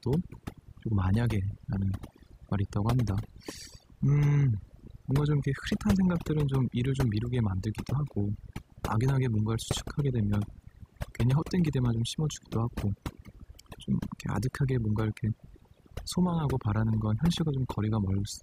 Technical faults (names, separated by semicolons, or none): overdone noise removal